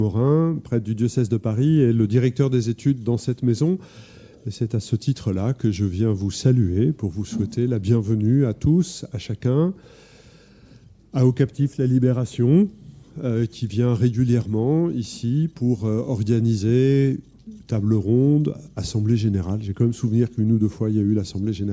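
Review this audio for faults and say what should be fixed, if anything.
Nothing here needs fixing, as the signal stays steady and intact across the whole recording, with no audible technical problems at any point.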